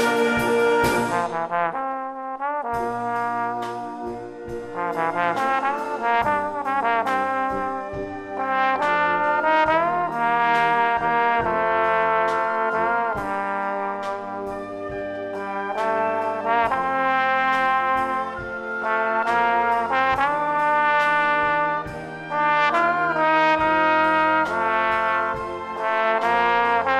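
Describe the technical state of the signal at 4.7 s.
At 4.7 s the signal is intact, with no technical fault audible at that point.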